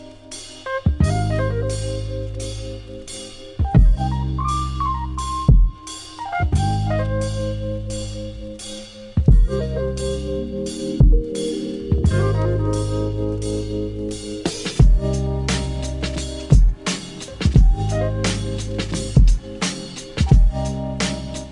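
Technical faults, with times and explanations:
No technical faults detected anywhere in the audio.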